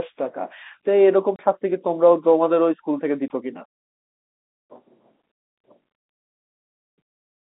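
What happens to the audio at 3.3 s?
At 3.28 s there is packet loss filled with silence: a brief hard-edged gap of about 20 ms, which fits two lost 10 ms packets.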